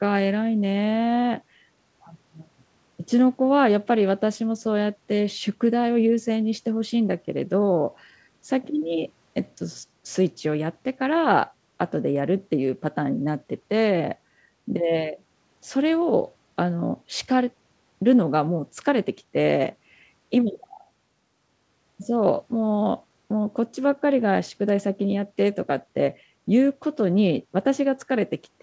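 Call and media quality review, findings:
Nothing stood out on listening to the speech over the G.722 call path.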